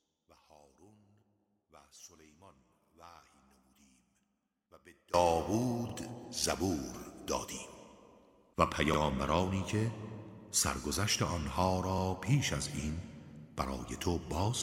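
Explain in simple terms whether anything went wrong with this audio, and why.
Two things go wrong. From the start to about 5.1 s, the sound is very faint. The likely cause is one channel inverted. One stereo side is flipped, so when the two sides are combined, the shared sound cancels and mostly disappears.

There are also overlapping chunks. The audio was handled in 3-second pieces, and each piece began slightly early. So a tiny bit, about 44 ms, plays twice. You hear a brief stutter or click at 2.85, 5.89, 8.94 and 11.98 s.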